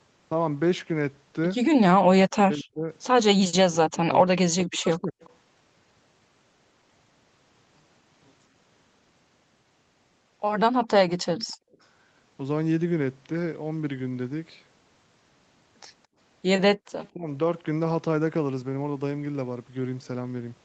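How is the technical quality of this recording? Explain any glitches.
The recording carries clear call-processing faults: the speech is cut down in three places, faint delayed echoes slip through three times, and the room sound drops out twice. The whole clip also tops out near 8 kHz, which fits the band-limited Opus path it travelled through.

Speech suppressed in double talk, from 2.32 to 5.17 s, 10.73 to 11.09 s and 17.14 to 17.27 s: the voice sinks sharply and breaks into pieces. In the first stretch the gaps add up to about two seconds, and the deepest dips reach roughly 40 dB. The last one is much milder, at about 15 dB. The likely cause is an echo canceller faced with both ends talking at once. It could not tell the local talker from loudspeaker echo, so it attenuated everything.

Echo leak, at 5.21 to 5.3 s, 11.1 to 11.53 s and 17.03 to 17.09 s: a faint, delayed copy of the speech trails behind it, sitting roughly 30 to 35 dB below the main voice and lagging by 220 ms. 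Each leak comes right next to a suppression episode. The likely explanation is that the far end's loudspeaker playback was not fully cancelled at its microphone, so residue was sent back down the line.

Background gated by the echo canceller, at 11.54 to 11.79 s and 16.76 to 16.86 s: the room tone briefly vanishes, falling about 36 dB and about 39 dB respectively, then returns. During loudspeaker playback the canceller clamped the microphone hard to keep echo out, which silenced the ambience along with it for those fractions of a second.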